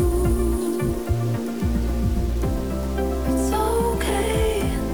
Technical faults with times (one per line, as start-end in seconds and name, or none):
0.00-4.94 low bit depth without dither